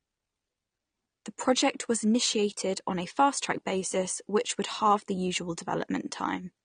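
Speech with audible AAC compression throughout: dull, smeared, with warbling sibilants. A spectrogram shows a low top cut-off, likely from AAC-LC near 32 kbps.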